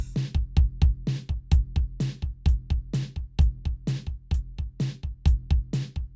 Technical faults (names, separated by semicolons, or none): none